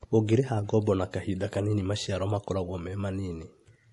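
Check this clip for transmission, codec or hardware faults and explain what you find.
One fault runs through the whole clip: audible codec damage, most likely from MP3 compression. Weaker spectral detail flickers in and out between frames, giving the speech a watery, swirling texture with chirpy, metallic s sounds and softened consonant attacks. The damage level fits a low bitrate around 48 kbps, where the encoder discards bands to save bits. A simple low-pass filter would remove treble but leave the remaining sound steady, without the frame-to-frame warble.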